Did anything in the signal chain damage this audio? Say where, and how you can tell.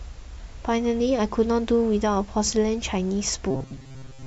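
Yes: robotic sound from repeated short buffers, from 3.51 s to the end at 4.26 s. The speech turns into a rigid, metallic buzz fixed at 133 Hz that still loosely tracks the syllables, and most of that stretch is repeated material rather than new audio. The stage is likely the driver or buffer: audio arrived too late, so a segment of about 7.5 ms was replayed over and over, imposing that pitch while the real signal was skipped.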